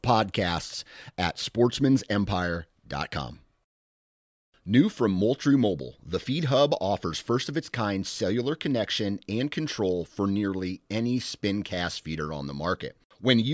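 No technical faults can be heard anywhere in the speech, with the signal holding steady and continuous throughout.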